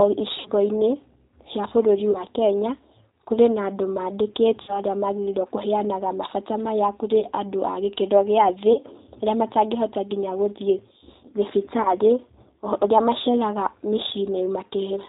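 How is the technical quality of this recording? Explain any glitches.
The quality is held back by a low-rate speech codec for the whole clip, plus six brief dropouts.

The entire recording has passed through the G.729 codec, here the G.729A variant at 8 kbit/s. Rather than storing the waveform, it sends a vocal tract filter shape, a pitch estimate and a handful of pulses per 10 ms frame, and it discards everything above 4 kHz. The damage is plainly audible: the speech sounds dull and band-limited, with a rough, slightly synthetic buzz on voiced sounds.

VoIP packet loss concealed by the speech codec occurs at 0.39–0.50 s, 2.12–2.24 s (just after "cia bũrũri"), 4.62–4.80 s, 7.20–7.26 s (between "kũheanaga mabata maya kũrĩ" and "andũ a gĩkĩro gĩa"), 8.73–8.79 s (after "a gĩkĩro gĩa thĩ") and 11.82–11.92 s. Audio went missing, 60 ms at the first and third points and 30 ms at the others, which fits two packets or one. 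The decoder fills each gap by extending the last pitch and filter at falling gain. These spots therefore sound like a smeared hold, a buzzy tone or coloured noise, that fades, and the speech stays weak briefly afterward while the decoder recovers.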